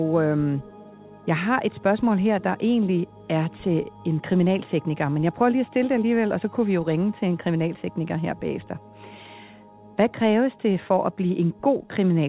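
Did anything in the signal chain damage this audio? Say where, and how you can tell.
No, nothing in the chain damaged it; the audio went through a WebRTC call path whose G.711 mu-law coding leaves nothing above 4 kHz, and that band limit and the codec's usual coding noise are all the call stage contributes.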